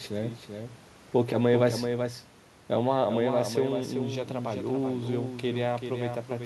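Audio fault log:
Throughout: doubled audio track. Each stretch of speech is followed by a second, slightly quieter copy of itself about 0.4 s later, full-band and dry, with no decay or room colouring, so syllables overlap and smear into a stuttering double. The copy sits roughly 5 dB below the original. This likely comes from the same signal being mixed in twice, once through a slower capture path or an edit that left two copies out of step.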